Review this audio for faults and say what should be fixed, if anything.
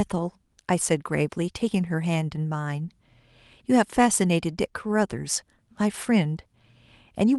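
No faults found; nothing needs fixing.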